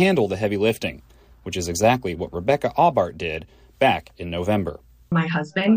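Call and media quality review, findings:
Clock slip clicks, 0.12 s to 5.75 s. Soft continuous rattle of single-sample ticks, roughly every 20 ms, around 50 per second, a few hundred in all. Likely cause: two unsynchronised device clocks, roughly 0.1% apart, forcing a one-sample drop or repeat each time the drift reaches a full sample.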